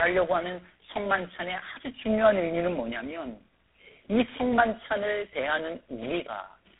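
Tandem speech coding runs through the whole speech clip: three lossy speech coders in a row, likely GSM full rate twice then G.726, leave it rough, warbly and dull above 3.8 kHz.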